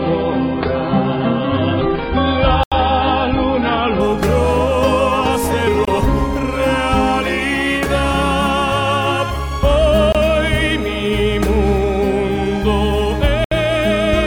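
For the first 4.0 s the player is running an adaptive stream starting at a low bitrate, the kind of choice made to begin playback quickly before the connection has been measured. The thin, muffled quality points to roughly 16 kbit/s AAC. Nothing reaches above 5 kHz, so the treble is simply absent and coding artefacts are prominent. At 4.0 s the stream switches to a far better rendition, likely around 96 kbit/s, and the top end returns abruptly with no gap in the sound.

Over the same stretch, at 2.63 s, comes the first block of digital silence: about 82 ms of the output were left as zeros, most plausibly because the output buffer wasn't filled in time. The sound drops straight to nothing and snaps back without any fade, and the whole event reads as a short hole. The same fault recurs at 5.85 s and 10.12 s, each time for 23 ms, which fits a 1024-sample buffer going unfilled. A last dropout at 13.44 s lasts about 70 ms and again comes across as a brief hole.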